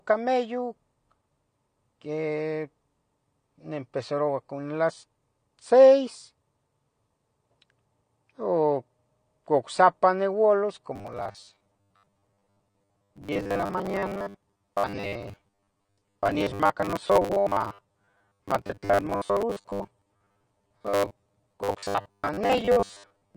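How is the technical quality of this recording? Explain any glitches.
The technical quality is poor. Codec damage runs through the whole recording, and the second half turns robotic.

From start to finish, the speech sounds dull and smeared. The likely cause is AAC compression, probably AAC-LC. At low bitrates the encoder drops the top band and coarsely quantises what remains against a hearing model. That leaves a warbling, fizzy texture on sibilants and held sounds. The damage is plainly audible and fits a bitrate around 32 kbps.

From 10.96 s to the end at 23.37 s, the speech becomes a rigid, metallic buzz at 100 Hz. This is robotic sound from repeated short buffers. New audio arrives too seldom, so the player loops the last short chunk to fill the gap, and the real audio is skipped. A 100 Hz buzz fits a repeated chunk of 10 ms. About half the sound is repeats, likely from a starved stream.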